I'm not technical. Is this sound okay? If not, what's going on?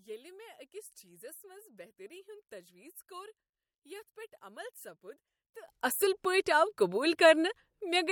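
No, not for the first part. From the start until about 5.68 s, the speech sounds much quieter, and then it snaps back to normal for the rest. That's most likely a case of one channel inverted: one side of the stereo is flipped upside down, so when the two sides get combined, the centred voice largely cancels itself out and only a faint trace is left.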